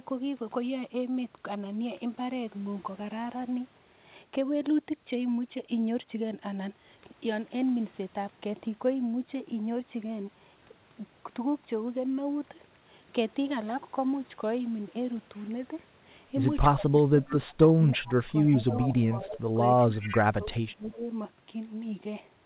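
Speech that dips by up to about 20 dB from 16.77 to 19.63 s and about 25 dB from 19.87 to 21.09 s is speech suppressed in double talk, likely an echo canceller ducking both talkers at once. Faint repeats arriving 321 ms late, about 15 to 30 dB below the speech, at 17.27, 17.94, 18.45, 18.69, 20.02 and 20.91 s are echo leak, likely loudspeaker pickup the canceller missed.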